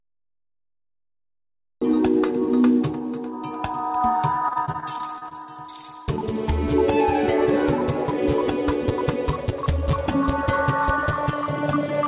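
The clip opens with a cut-off start: digital silence runs from 0.00 s until the sound appears abruptly at 1.82 s, already in progress. There is no attack or fade-in, so the audio steps straight from silence into the middle of a sound. This is what happens when capture or streaming begins late and the first part of the signal was never recorded.

From 4.34 s to 5.33 s there is repeated packet loss with a robotic sound. Around nine short dropouts occur within that second, the longest about 32 ms. Each hole is covered by extending the preceding audio, which accounts for roughly a fifth of the stretch, about 190 ms of concealment. Because the patches come in close succession, the sound turns choppy and mechanical, with small fragments missing between the repeats. Throughout the clip the audio carries nothing above 4 kHz. That narrowband limit fits a telephony call codec such as G.711 A-law.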